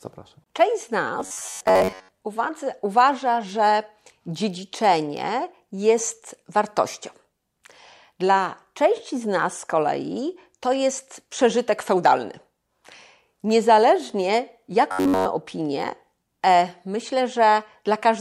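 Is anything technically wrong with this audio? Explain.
Yes: robotic sound from repeated short buffers at 1.20 to 2.18 s and 14.92 to 15.26 s, likely from audio arriving too seldom, so a roughly 10.7 ms slice is looped in place of skipped speech. The speech becomes a rigid metallic buzz at 93.8 Hz, over most of the first stretch and all of the second.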